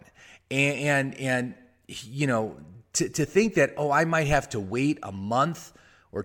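No technical faults can be heard anywhere in the speech. There is nothing in the audio that needs a time mark or a closer look.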